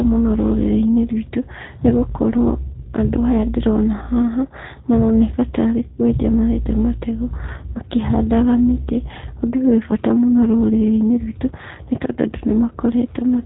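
Throughout, the speech sounds rough and synthetic, with nothing above 3.8 kHz: G.729 codec damage, rebuilding sound from a vocal-tract filter and sparse pulses at 8 kbit/s.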